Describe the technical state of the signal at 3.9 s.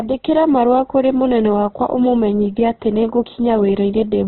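At 3.9 s you're hearing the same heavy damage that runs through the whole clip, most likely Opus compression. There's nothing above about 4.2 kHz, so the speech sounds boxed-in and dull. The encoder keeps the rough energy of each band but, short of bits, fills the detail with folded or noisy content, which makes the speech grainy and rough. That fits a very low bitrate around 12 kbps in its music mode.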